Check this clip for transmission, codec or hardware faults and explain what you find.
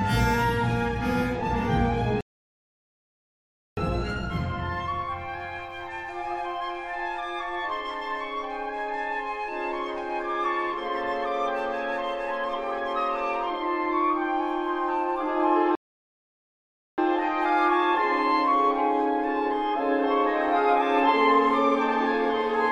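Two rebuffering stalls: from 2.21 to 3.77 s, then 15.75 to 16.98 s. The player exhausted its downloaded audio and paused, adding about 1.6 s then 1.2 s of silence before resuming exactly where it stopped. Waveform and spectrogram show flat, empty gaps with nothing missing on either side.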